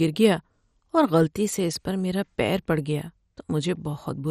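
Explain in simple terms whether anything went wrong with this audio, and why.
The speech was most likely squeezed through MP2 compression, a type of encoding that divides the sound into narrow frequency slices and hands out only a limited number of bits to each. Here the bits ran short, so the top slices were dropped entirely and nothing above about 14.6 kHz survives. The remaining slices are stored crudely, so from the first second to the last the voice sounds dull and carries a gurgling, grainy roughness.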